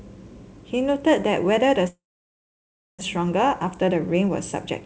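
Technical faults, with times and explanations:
1.88–3.03 s, long network dropout: the sound breaks off into a brief fading fill, then roughly a second of silence, and resumes with about 0.78 s of audio missing. The likely cause is packets lost in transit, leaving the receiver nothing to play.
3.17–4.81 s, jitter buffer speed-up: the speech runs about 6% fast at unchanged pitch, sounding slightly hurried. After the gap the buffer held excess audio, so short pitch-period pieces were trimmed repeatedly, around a tenth of a second in total.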